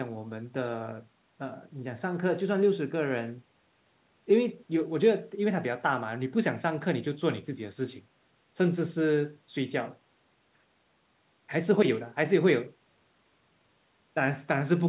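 No technical faults can be heard in this speech clip. It has the narrow sound of a telephone call: nothing reaches above about 4 kHz, which points to a G.711 mu-law call path.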